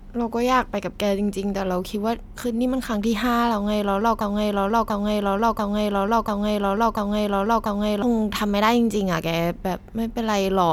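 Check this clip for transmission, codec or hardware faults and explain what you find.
One fault is present, a broken-record loop. From 4.21 s to 8.02 s, a 0.69 s fragment of speech repeats exactly, back to back, six times. The likely cause is a stalled player, encoder or stream resending its last buffer. The speech that belonged there is lost.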